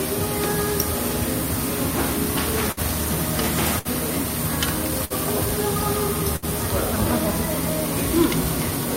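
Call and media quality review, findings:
Burst of packet loss, four events: 2.71–2.80 s, 3.79–3.88 s, 5.05–5.13 s, 6.36–6.45 s. Symptom: a short smeared tail of the preceding sound, fading over roughly 55–60 ms, then playback resumes with 60 ms absent. Probable component: network path/jitter buffer, with receiver concealment. Mechanism: consecutive packets lost; the decoder extends and attenuates the last frame. Distinguishing cue: a fading sustain plus a skip, not hard silence or a click.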